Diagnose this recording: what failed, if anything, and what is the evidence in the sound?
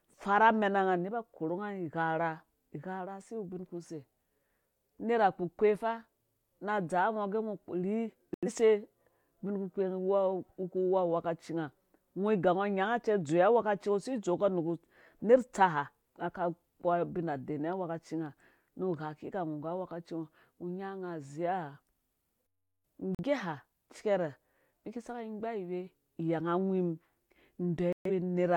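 The failure is at the reception and decoding stage: a digital broadcast dropout. The speech mutes to silence three times, at 8.34 to 8.48 s, 23.15 to 23.23 s and 27.93 to 28.11 s. The lost audio amounts to about 85, 43 and 128 ms, all multiples of roughly 43 ms, which points to whole lost codec frames. The receiver muted until valid frames returned. Unlike network packet-loss concealment, nothing is synthesised to fill the gaps, and the lost audio never reappears.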